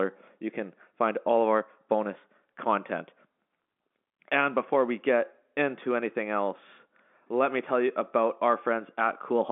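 Speech over a telephone-band line, energy confined to roughly 200 Hz to 3.5 kHz with nothing above 3.8 kHz, consistent with G.711 mu-law coding, and no faults present.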